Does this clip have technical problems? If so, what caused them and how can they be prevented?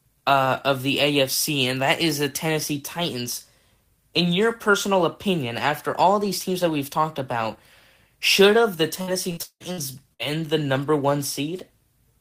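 Yes. From 9.01 to 10.22 s, just after "should have the" and before "the number", the speech turns choppy, with about five short holes, the longest around 175 ms. This is repeated packet loss (robotic sound): audio packets went missing or arrived late in quick succession, and each gap was filled by stretching the last bit of sound, so roughly a third of that stretch is patched. A steadier network path or a larger jitter buffer would prevent it.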